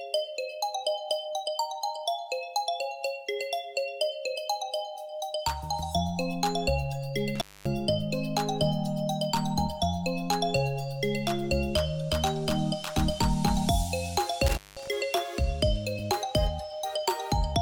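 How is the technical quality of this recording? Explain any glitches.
Two brief dropouts from an intermittent contact. At 7.35 to 7.67 s and 14.47 to 14.88 s, a loose connection opens for about 0.24 s and 0.19 s. The sound cuts out, with crackle at each edge.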